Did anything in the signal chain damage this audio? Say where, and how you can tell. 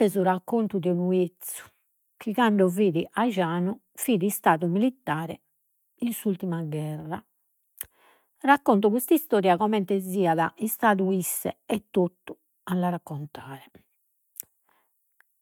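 No, nothing in the chain damaged this recording.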